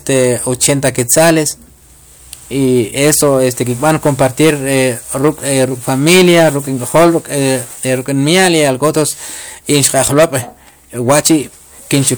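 Speech, hard clipped from start to finish: the signal runs about 13 dB hotter than the stage carrying it can pass, so every louder syllable has its peaks sheared off flat, a few percent of all samples in total. That is heard as a harsh fuzz riding on the voiced, louder moments. A waveform shows flat-topped plateaus on the peaks, and a spectrogram shows added harmonic energy smeared high up the spectrum on each peak.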